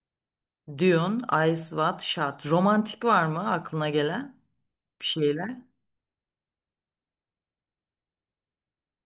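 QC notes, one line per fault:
No fault in this speech clip.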